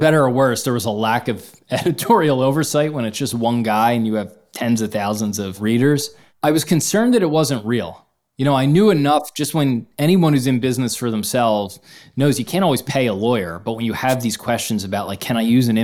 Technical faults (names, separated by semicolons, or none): wireless microphone noise hit